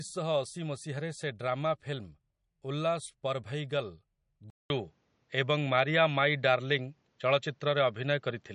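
Speech runs through the whole clip with plainly audible MP3 compression, likely from encoding at a low bitrate (the damage fits something near 40 kbps). Nothing passes above 10.6 kHz, where the encoder has cut the treble. Weak frequency components drop in and out between frames, which gives the speech a watery, swirling texture, puts a metallic edge on sibilants, and softens the onsets. At 4.50 s there is a 200 ms gap, and from there to the end the sound is narrower and boxier, with nothing above 7.6 kHz. This points to an input switched to a poorer device, likely a different microphone or a headset's call profile. The level shifts by a few decibels at the switch, and a new, faint noise floor appears well below the speech. That limited band and changed tone hold for the remaining four seconds.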